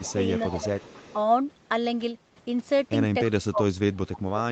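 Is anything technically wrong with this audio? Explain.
Yes, two faults recur. Speech suppressed in double talk appears at 0.01 to 0.21 s, 0.49 to 0.72 s and from 3.4 s to the end. The level dips by about 15 dB, about 10 dB, then about 25 dB. This is likely an echo canceller ducking everything while both sides talk. Unlike packet-loss dropouts, the sound fades and thins rather than clicking or glitching.

Echo leak appears at 0.06 to 0.13 s and 0.35 to 1.18 s. A faint copy of the sound trails it by 282 ms, about 20 dB down. This is likely a speakerphone echo escaping cancellation. Its fixed, distinct delay separates it from room reverberation, which smears continuously.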